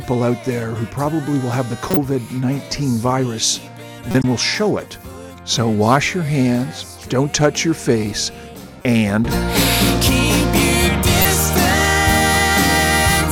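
Corrupt frames decoded produce short bursts at 1.90–1.97 s, 4.11–4.24 s, 8.76–8.85 s and 11.20–11.25 s. Damaged compressed frames were played back as if valid, so misread gains and codes put energy at the wrong frequencies. Each burst sounds like a brief chirp or noise blip lasting a few frames. The first and last are the strongest, the one at 4.11 s is slightly quieter, and the one at 8.76 s is noticeably softer.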